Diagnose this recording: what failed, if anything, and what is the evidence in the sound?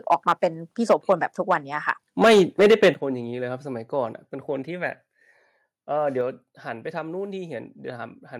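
Microphone overload at the converter stage. The loudest syllables crackle harshly at 0.11–0.44, 0.89–1.13, 1.50–1.54 and 2.22–2.89 s. Peaks run about 2 to 7 dB past the converter's limit, with the tops flattened. The worst is the last burst, where a sizeable share of samples is cut. The likely cause is input gain set too high.

Microphone volume stepped down, in call processing. Voice and background both drop suddenly at 0.92 s, by about 2 dB, and again at 2.94 s, by about 9 dB. Each drop follows a distorted peak. The software likely cut the device's input gain after detecting clipping.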